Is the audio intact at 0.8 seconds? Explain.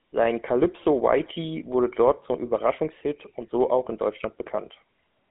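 No. GSM full-rate codec damage runs through the whole clip, including 0.8 s. The codec rebuilds the sound from a vocal-tract model excited by regularly spaced pulses, keeping only a thinned-out version of the excitation, at a rate that fits 13 kbps. The band is confined to roughly 200 Hz to 3.4 kHz, so the speech is thin and muffled at the top, with a plainly audible buzzy, gravelly roughness.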